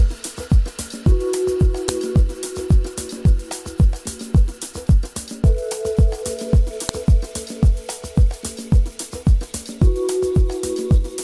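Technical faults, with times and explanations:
1.89 s and 6.89 s, file header played as audio: a sharp, loud click at each point, five seconds apart, heedless of the surrounding sound. Joined pieces kept their WAV headers, so those few dozen bytes were decoded as sample values.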